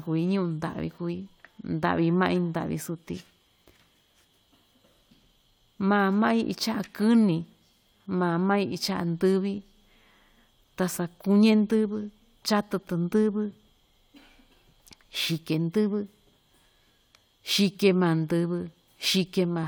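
No technical faults can be heard anywhere in the speech; the signal holds steady and continuous throughout.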